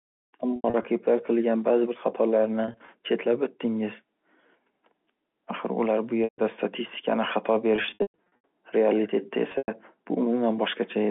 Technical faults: packet loss with pitch repetition

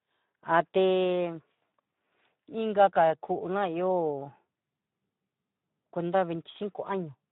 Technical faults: Speex codec

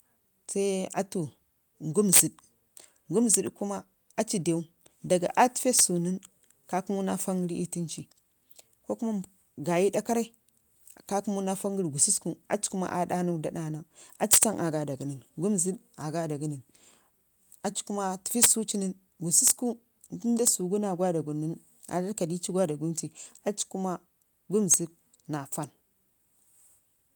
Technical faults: integer overflow

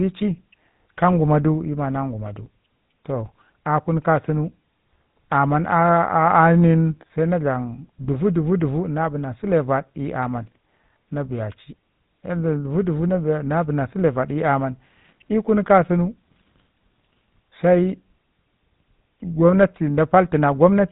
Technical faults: GSM full-rate codec

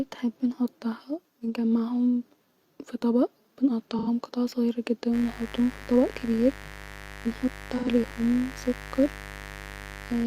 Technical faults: AAC frame loss with concealment; mains buzz

